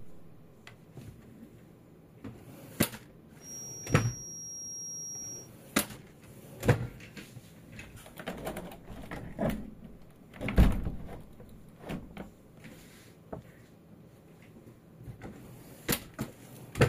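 A recording of everyday sounds carries a feedback whistle from 3.38 to 5.51 s: a thin, steady 5.6 kHz tone sitting a little below the main sound and wavering slightly, likely a loudspeaker-to-microphone loop held just short of runaway. A spectrogram shows a single narrow horizontal line there.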